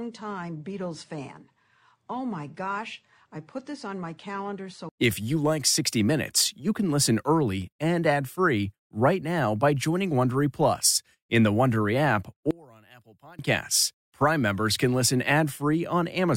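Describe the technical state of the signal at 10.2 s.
At 10.2 s the speech signal is intact, with no dropout, clipping, distortion or other fault present at that moment.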